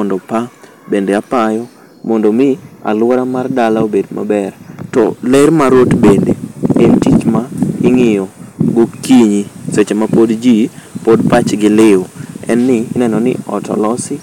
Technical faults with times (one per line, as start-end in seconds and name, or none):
0.00-14.22 hard clipping